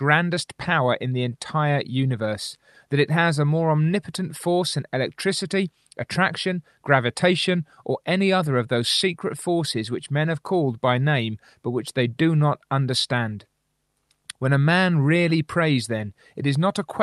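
No technical faults can be heard in the speech, which shows only the ordinary character of a call path, with the usual coding texture and high frequencies rolled off around 12 kHz, consistent with an Opus super-wideband link at a moderate bitrate.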